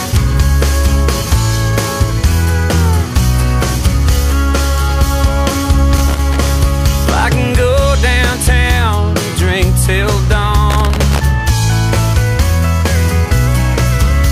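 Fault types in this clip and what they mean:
Loose connector crackle: a worn or dirty contact in the signal path briefly loses and regains connection, so the audio is chopped into ragged fragments, with pops where any DC on the line jumps. Two irregular bursts of scratchy crackle, roughly half a second each, occur at 5.97–6.47 s and 10.70–11.20 s. Unlike steady surface noise or evenly spaced digital clicks, the bursts are isolated and uneven, as if a cable were moved.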